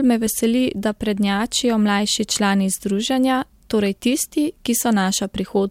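No technical faults occur at any point in this speech, so there is nothing to describe in time order.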